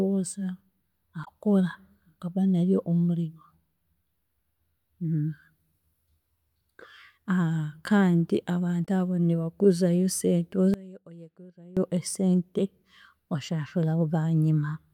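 At 1.21 to 1.28 s, and again at 8.82 to 8.88 s, there is damaged data in the compressed stream. Each burst lasts about 60 ms. Part of the encoded data was corrupted there. The decoder misread those frames and lost sync. It then had to hunt for the next valid frame header before normal playback resumed. Each event is heard as a chirp, squawk, click or short hole.

From 10.74 to 11.77 s, the speech drops by about 22 dB. The centred voice nearly vanishes, leaving only a faint residue. The likely cause is one channel inverted. With one stereo channel in reversed polarity, summing to mono cancels everything the two channels share. Only the small difference between them survives. For about one second, this leaves a weak trace of the voice.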